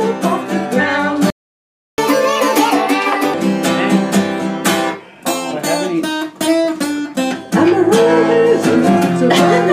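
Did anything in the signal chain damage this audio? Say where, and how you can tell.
Yes. The damage is at the playback stage. A playback stall, most likely from the player's buffer running dry or its thread being blocked, cuts the output to silence from 1.30 s to 1.98 s, a gap of about 0.68 s. The sound halts abruptly in mid-flow instead of fading out.

Immediately after, from 1.98 s to 3.34 s, the player applies catch-up at higher speed. It resamples its backlog to run 1.5 times faster and win back the lost time. Tempo and pitch rise together, the pitch sitting roughly seven semitones up, so for about 1.4 s the sound is audibly quicker and higher. It then drops back to normal rate at 3.34 s. Because speed and pitch shift together, this is plain resampling rather than time-stretching.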